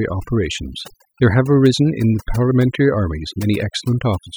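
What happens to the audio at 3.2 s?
Overdone noise removal is active at 3.2 s, as it is across the whole clip. A noise reducer set too aggressively pushes individual frequency bands down or off wherever they sit near its noise estimate, removing quiet parts of the speech too. The background drops and breaks up into twinkling specks.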